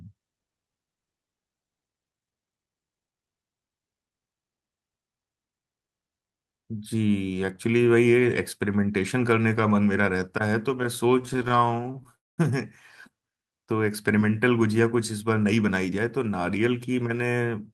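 Speech, with three network-delivery faults clustered in the second half. From 11.19 to 12.15 s there are repeated stalls (stutter): 29 brief gaps, the longest 23 ms, where the receiver ran short of packets and stretched the last sound to bridge them. Nothing is lost, but roughly 0.3 s of filler, 31% of that stretch, makes the speech drag and judder. On a spectrogram this appears as a string of tiny flat-topped blocks where harmonics are held unchanged for a few milliseconds, chopping the normal smooth contours; the waveform shows short repeated cycles. Immediately after, from 12.15 to 12.40 s, comes a call audio freeze. The sound is held for an instant, then drops to silence for about 0.21 s before resuming where it left off, adding roughly 227 ms of delay without removing anything. The likely cause is packets held up in transit, so the jitter buffer emptied completely. The waveform goes flat and the spectrogram shows a clean vertical blank band. 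Later, from 15.36 to 15.99 s, a jitter buffer speed-up trims the backlog by cutting out short pitch-period slices, around 70 ms in total, so this passage runs at 109% speed with unchanged pitch and sounds hurried. On a spectrogram the syllables are squeezed closer together while the harmonic spacing stays the same; the waveform shows repeated splices between periods.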